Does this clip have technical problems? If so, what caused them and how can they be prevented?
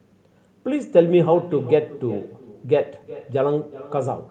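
Yes. Throughout, each phrase returns roughly 0.4 s later as a thin copy about 18 dB down: echo with no canceller, the far loudspeaker feeding its microphone. Enabling acoustic echo cancellation at the far end, or having that participant wear a headset, prevents it.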